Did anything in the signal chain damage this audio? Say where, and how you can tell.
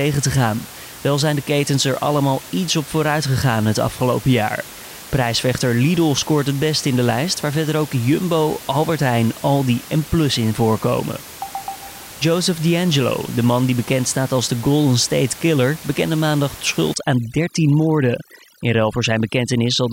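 Yes. Overdone noise removal in the call-processing stage runs from 16.94 to 19.93 s, just after "bekende maandag". The suppressor drives bands near its noise estimate down or off, quiet speech detail included, leaving a lowered background that breaks up into twinkling specks.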